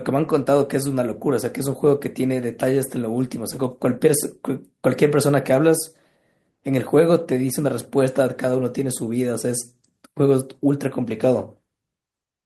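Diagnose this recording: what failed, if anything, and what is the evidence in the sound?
Nothing failed: the speech carries no audible dropout, distortion, glitch or level fault at any stage from capture to playback.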